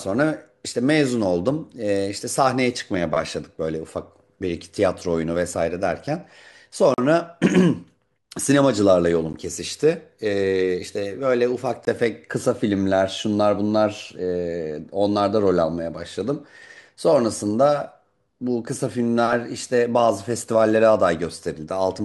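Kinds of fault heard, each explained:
Block of digital silence: the sound drops abruptly to silence with no fade. Short holes in the speech occur near 6.94 and 11.85 s, and a brief tick or dip near 9.33 s.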